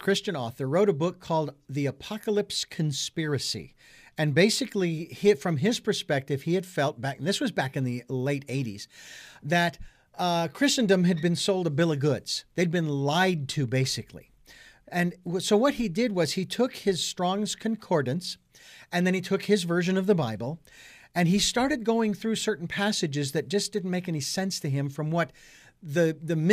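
No technical faults can be heard anywhere in the recording.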